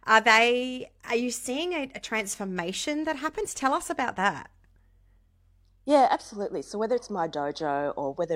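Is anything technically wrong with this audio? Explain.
No, nothing technically wrong can be heard here.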